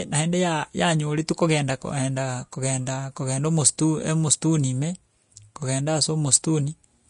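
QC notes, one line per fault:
Throughout, Vorbis compression: the speech has nothing above 10.5 kHz, and the treble beneath that limit is grainy and hissy, with consonant attacks smeared and voiced tones roughened. This is likely Vorbis coding at a low setting, and the plainly audible damage fits a bitrate near 35 kbps. The encoder cuts the top band away and quantises the remaining high-frequency residue so coarsely that fine detail is replaced by noise of similar energy.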